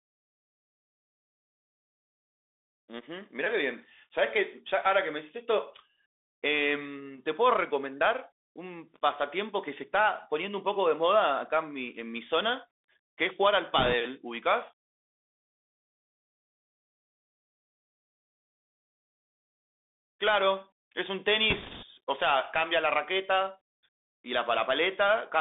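Bluetooth CVSD headset codec, throughout: the speech is confined to roughly 250 Hz to 3.6 kHz, which fits a 64 kbps one-bit delta stream whose adaptive step can't keep up with loud, bright sounds. Sibilants turn scratchy, and a granular hiss sits under the speech.

Bit errors on a Bluetooth voice link, from 13.79 to 13.94 s and again from 21.50 to 21.85 s: a few percent of bits flip, and each error fades quickly without sharp clicks, leaving a brief rushing, crackly noise over the speech.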